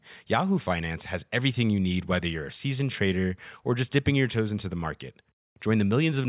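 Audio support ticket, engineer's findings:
No faults found on listening; speech clip checked through, nothing to attribute to any component.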